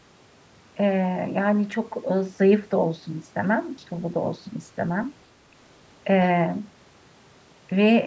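The speech carries no audible technical faults.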